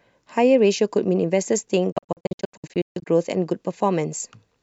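From 1.92 to 3.07 s the speech keeps cutting out in short silent gaps, the longest about 142 ms, likely a Bluetooth dropout where late packets got discarded.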